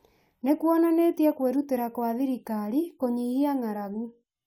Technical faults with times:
none

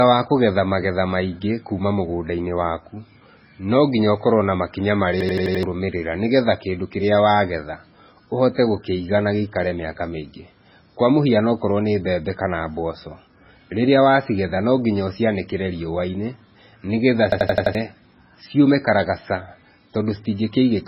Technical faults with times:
0.00-20.88 MP3 compression
5.21-5.63 system hang loop
17.32-17.75 system hang loop

